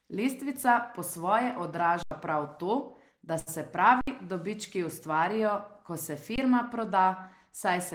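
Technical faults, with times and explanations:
2.03–2.11 s, 4.01–4.08 s and 6.36–6.38 s, underrun with held sample: the output buffer ran dry and the converter just sat on its last value, so the waveform goes flat and the sound stops almost without a click. The first gap, after "po svoje", lasts 85 ms, which fits a 4096-sample buffer. The second, after "to da se", lasts 64 ms. The last lasts 21 ms, which fits a 1024-sample buffer. Live audio kept going meanwhile, so roughly 100, 70 and 20 ms of it are lost.
3.39–3.49 s, short stall from a late packet: right after "to da" a packet didn't arrive in time, the jitter buffer emptied, and the receiver stretched the last bit of sound for 74 ms until it showed up. Playback then resumed from the same spot, so nothing is actually lost. You hear a sound hanging on too long with a faint buzz or dip, and everything after it runs 74 ms later.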